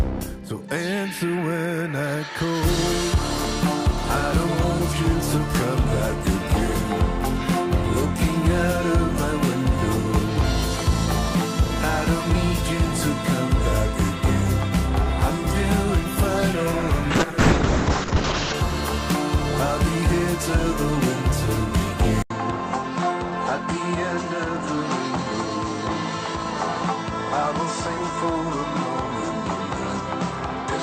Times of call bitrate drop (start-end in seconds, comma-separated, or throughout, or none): 17.11-18.60